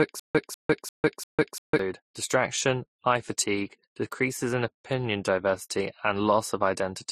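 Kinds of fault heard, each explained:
Transcoding between lossy codecs: Speech that passed through one lossy encoder and was then re-encoded by another has both sets of artefacts at once. Here the sound points to an MP3 stage near 42 kbit/s followed by Vorbis near 36 kbit/s, which is likely the cause of the mixed artefacts of both codecs heard together throughout. On a spectrogram the content stops at a hard ceiling at 15.1 kHz, with patchy, smeared detail just below it.
Stutter with silent gaps: From the start to 1.79 s, a single fragment of about 196 ms plays, falls to about 151 ms of dead silence, and then plays again on a steady 347 ms cycle, four times. The repeat is already under way when the clip begins. The audio for that stretch is missing, most likely because playback stalled and replayed its last buffer at each retry. On the waveform this appears as identical blocks separated by flat silent gaps, and a spectrogram shows repeated columns with empty gaps between them.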